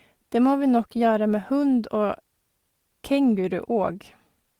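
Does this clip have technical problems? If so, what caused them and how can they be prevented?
No, the speech signal in this clip shows no technical problems that would need a cause or a preventive fix.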